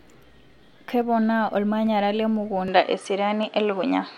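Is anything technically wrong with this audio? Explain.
Yes. There are two kinds of fault.

Dropped samples at 1.02, 1.87 and 3.43 s. Each is a single sharp click, likely from a fraction of a millisecond missing, so the waveform jumps.

Input switched to a poorer device at 2.68 s, lasting to the end. With no gap, the speech turns duller, with a narrower band. The level shifts by about 5 dB, and new background noise sits about 50 dB below the speech. This is likely a change of microphone mid-recording.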